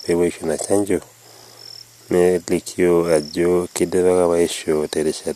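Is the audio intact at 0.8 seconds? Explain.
Yes, the audio is intact at 0.8 seconds, with nothing audible at that moment to suggest a dropout, glitch or other technical fault.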